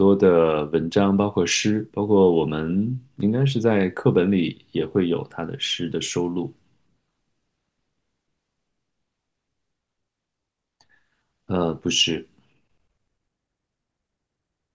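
No technical faults are audible.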